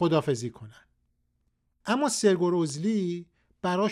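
Speech with CD scratch ticks: four ticks between 2.46 and 3.17 s, each under a millisecond, one per disc revolution where a scratch defeated error correction.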